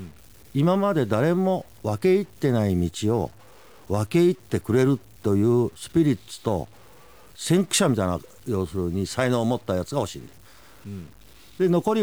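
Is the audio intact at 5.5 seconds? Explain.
No, at 5.5 seconds, as throughout, the speech has a gritty, signal-following graininess, likely low bit depth without dither, consistent with 8-bit truncation leaving error noise around 30 dB down.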